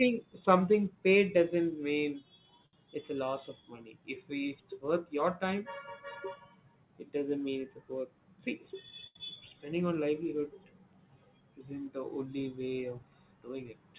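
Right after "something paid doesn't mean", at 2.66 to 2.74 s, there's a short stall from a late packet. The jitter buffer ran dry, so the receiver held the last sound for 69 ms until the packet showed up. Nothing's lost, just a sound held too long before "it's a". The same thing happens at 9.07 to 9.16 s, this time stretched for 86 ms.

At 13.03 to 13.65 s, after "the only way of", there's a jitter buffer speed-up. The buffer had built up extra audio, so the receiver trimmed roughly 70 ms worth of pitch-period slices. The speech runs at about 110% speed with unchanged pitch, so it sounds a bit hurried. All of this sits on a G.711 mu-law call path, which is why there's nothing above 4 kHz.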